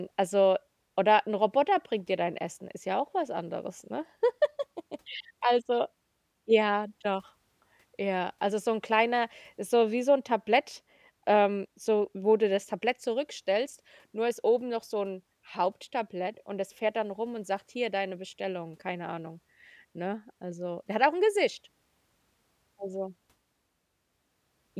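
No technical faults can be heard in this speech recording.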